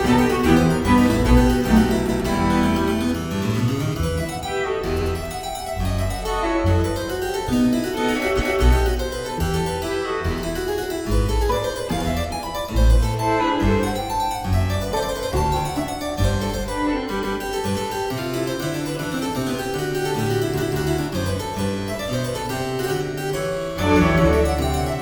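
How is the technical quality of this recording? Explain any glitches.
The recording stutters five times, at 2.05, 4.97, 8.36, 17.19 and 20.58 s, each time briefly replaying the previous 0.09 to 0.23 s. These are repeated frames: a short run of compressed frames was delivered twice, so the decoder plays that stretch again and the audio grows longer.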